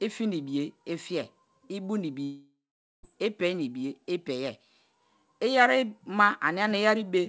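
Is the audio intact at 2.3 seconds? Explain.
No. From 2.24 to 3.05 s, just after "fiye i bu ni", the sound trails into a fading buzz or hiss, then about 0.48 s of near silence, and 0.8 s of audio is gone. This is likely a long network dropout, with the receiver concealing the gap.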